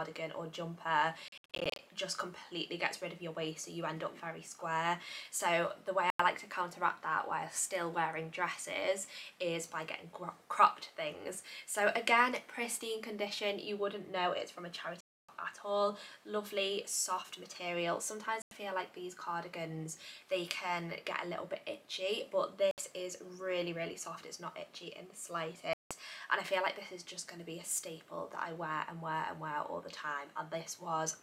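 Bluetooth dropout at 1.28, 6.10, 15.01, 18.42, 22.71 and 25.73 s: the sound cuts abruptly to silence, then resumes further on, as if it had kept playing. Late packets, likely dropped before reaching the headphones, leave one scattered burst of short gaps over 0.5 s, then single holes of 0.07 to 0.28 s.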